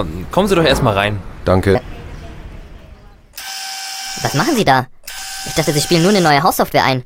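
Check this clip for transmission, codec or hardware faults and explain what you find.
One fault stands out. Section at the wrong speed, from 1.75 s to the end: the audio runs 1.31 times too fast, likely from playback against the wrong clock, so the sound turns hurried and about five semitones higher.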